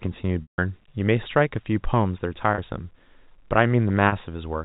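At 0.42 to 0.58 s there's packet loss with pitch repetition: a 160 ms gap where the receiver loops the last pitch period, fades it to silence, then cross-fades back into speech. The 40 ms losses at 2.54 to 2.58 s and 4.08 to 4.12 s just sound like a briefly held, buzzy note.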